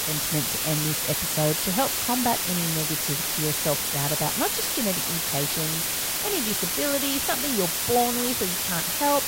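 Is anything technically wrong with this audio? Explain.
Yes. Throughout the speech there's low bit depth with dither: only about 3 bits are in play, and dither added before rounding turns the coarse quantisation error into a steady white hiss, roughly as loud as the talking itself, with no gritty distortion.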